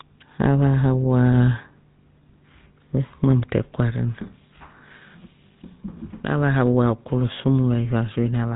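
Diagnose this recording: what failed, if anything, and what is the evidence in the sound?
A buzzy, gravelly roughness runs through the whole speech, with nothing audible above 4 kHz. That is GSM full-rate codec damage at the codec stage, consistent with 13 kbps. The vocal tract is modelled and driven by sparse, regularly spaced pulses instead of the real excitation.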